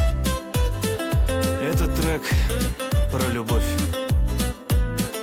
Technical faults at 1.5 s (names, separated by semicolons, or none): clock drift between sender and receiver; repeated timing corrections